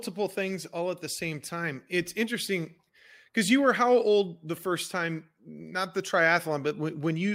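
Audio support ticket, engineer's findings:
Nothing to flag on the speech recording here, no audible faults anywhere in it, so there's nothing to chase on this ticket.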